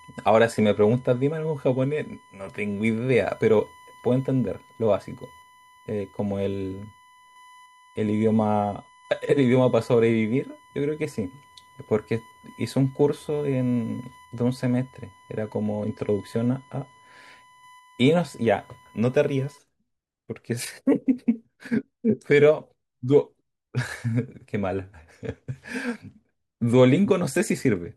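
Speech carrying USB whine from 0 to 19.58 s: a fixed 1 kHz tone, roughly 30 dB below the speech, set by 1 ms bus frames. Mains hum would sit far lower, at 50 or 60 Hz.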